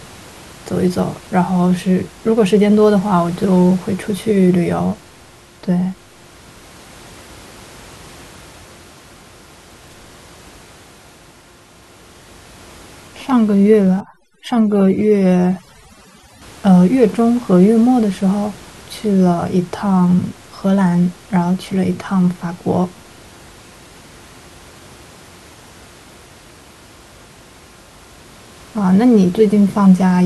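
A speech recording with room noise sitting about 26 dB under the voice, until 14.00 to 16.42 s, where overdone noise removal kicks in: the gating strips quiet bands, leaving twinkly near-silence between phrases.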